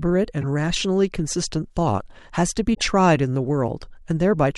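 Corrupt frames decoded at 0.41–0.44 s and 2.74–2.82 s: damaged compressed frames were played anyway, misplacing spectral energy and producing short squeaky bursts, the second louder.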